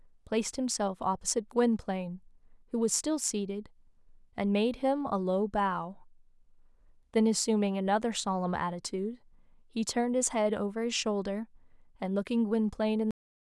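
At 13.11 s the speech has a cut-off end: the final stretch of audio was never written out, so playback stops abruptly mid-sound and falls straight to digital silence for the remaining 0.37 s, with no natural decay or room tail.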